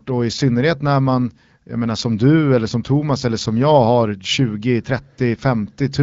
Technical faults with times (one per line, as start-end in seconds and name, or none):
none